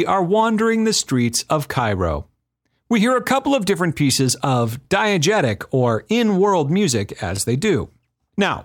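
At 7.37 to 7.39 s, just after "or in world music", there is an overlapping chunks fault: the next block, which fits a 2.5 s chunk length, starts before the previous one finished, so 20 ms of speech plays twice, producing a brief click-like stutter at the join.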